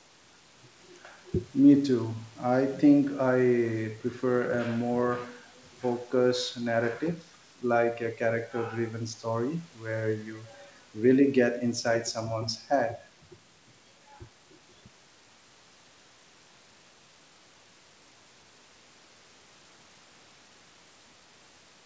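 No technical faults can be heard in this speech. The sound carries nothing above 8 kHz, consistent with a call's microphone path and G.722 wideband telephone coding, and the coding leaves at most a faint trace.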